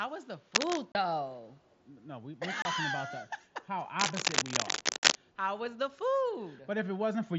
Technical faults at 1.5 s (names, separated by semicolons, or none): echo leak